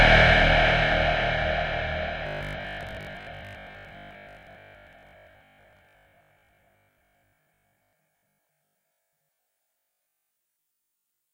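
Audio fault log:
2.27–11.33 s, robotic sound from repeated short buffers: the sound turns into a rigid, metallic buzz at 50 Hz that only loosely tracks the original. The likely cause is audio arriving too seldom, so the same 20 ms block is replayed to fill the gaps while most of the real audio is skipped. On a spectrogram this shows as evenly spaced horizontal lines at multiples of 50 Hz, and the waveform shows identical 20 ms cycles repeating.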